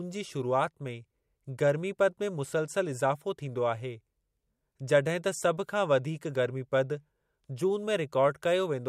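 Speech with no audible faults.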